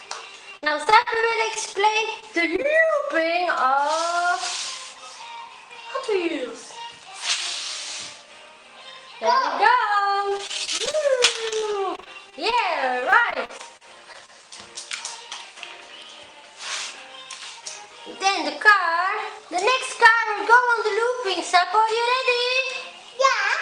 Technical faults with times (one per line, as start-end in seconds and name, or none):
0.51-2.90 repeated packet loss (robotic sound)
10.29-10.95 repeated packet loss (robotic sound)
11.49-12.54 repeated packet loss (robotic sound)
13.00-14.45 repeated packet loss (robotic sound)